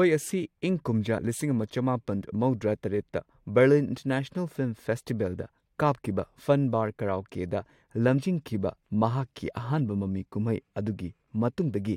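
A speech recording with two brief skips where the audio lurches forward, at 1.17 s, between "ꯑꯁꯤ ꯏꯪ ꯀꯨꯝꯖꯥ" and "ꯂꯤꯁꯤꯡ ꯑꯃ", and again at 8.17 s. These are compressed frames skipped: about one frame, roughly 20 ms of sound, is dropped each time, fitting a 21.3 ms frame.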